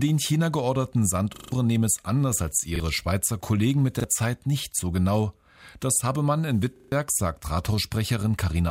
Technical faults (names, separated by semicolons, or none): repeated buffer